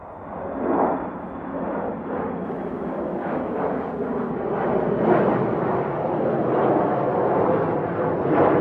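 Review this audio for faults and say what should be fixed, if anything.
Mains buzz from 2.44 to 4.31 s: a steady, raspy buzz built on 60 Hz, sitting well below the main sound, roughly 40 dB down. Sharp switching spikes twice per mains cycle spray harmonics of 60 Hz up into the kilohertz range, which gives the rasp. To prevent it, keep dimmers and rectifying supplies off the audio circuit and use properly shielded, grounded cabling.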